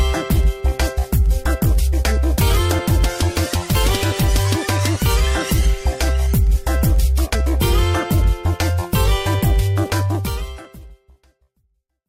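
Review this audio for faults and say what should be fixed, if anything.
At 1.92 s, compressed frames skipped: whole frames were missing or rejected by the decoder, so the audio jumps ahead about 70 ms. Verify file integrity and re-encode or re-transfer from a clean source.

From 9.90 to 11.90 s, periodic USB or driver dropouts: a background task stalls the audio path every 0.249 s, skipping roughly half a millisecond each time and producing regular ticks under the fade-out. Disable the interfering background process or power-saving polling, and use a larger buffer on a dedicated USB port.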